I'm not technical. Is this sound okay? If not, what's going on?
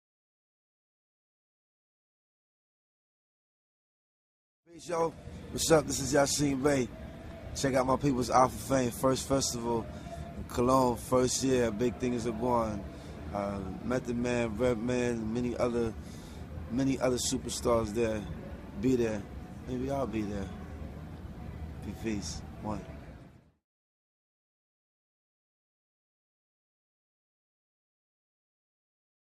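No. From 4.78 to 8.78 seconds the sound suddenly gets poorer, less crisp and more processed, then snaps back. This is an adaptive stream at a lower bitrate: a slow connection briefly forced a lower-quality version. Unlike a dropout, nothing cuts out or stutters.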